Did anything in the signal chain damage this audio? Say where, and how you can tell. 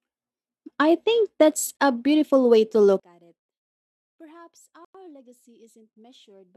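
Yes. Likely a Bluetooth stall in the wireless link: the buffer ran dry, cutting to silence at 1.77–1.80 s, between "I think that's" and "a beautiful way", and at 4.85–4.95 s.

Wiring or mixing stage, likely one channel inverted: from 3.0 s onward, the mono sum cancels the shared centre, dropping the level about 28 dB to a faint residue.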